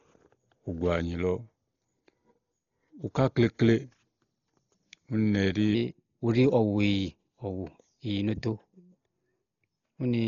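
From start to finish, the speech is dull and band-limited. Nothing is heard above 6.9 kHz. Tones carry a rough, fluttering noise. This is likely heavy Dolby Digital compression. The damage points to a very low bitrate, around 32 kbps, where unfunded lines are filled with noise.

At 5.75 s the section at the wrong speed begins and runs to the end at 10.27 s. Playback runs 1.13 times too fast. Pitch rises by about two semitones, and the speech turns high and hurried. A likely cause is a wrong playback clock.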